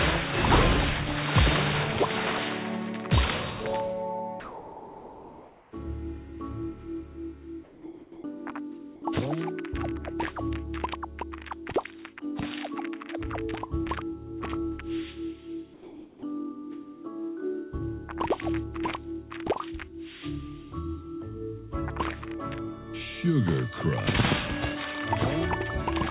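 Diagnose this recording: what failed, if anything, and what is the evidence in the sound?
Sound dropped by the voice detector at 4.4–5.72, 7.64–8.24, 8.96–9.02 and 15.74–16.22 s: sound gives way to steady comfort noise, likely sender call-processing detector misreading it as background.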